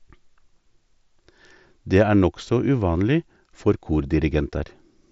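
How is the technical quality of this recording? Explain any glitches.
The technical quality of this speech recording shows no glitches, with the sound coming through a Bluetooth mSBC headset link that passes nothing above about 7.7 kHz.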